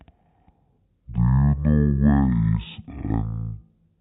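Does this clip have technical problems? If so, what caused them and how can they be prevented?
Yes. The whole clip suffers from stereo read as mono: the left and right samples, which alternate in the file, were taken as consecutive samples of a single channel. The speech therefore plays at 0.5× speed and 12 semitones (an octave) low throughout. Unlike a plain sample-rate mismatch, which also slows and lowers audio, this fault leaves a fainter mirrored copy in the upper half of the spectrum. To prevent it, read the channel count from the file header and de-interleave stereo before processing.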